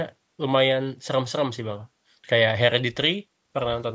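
No technical faults occur at any point in the speech.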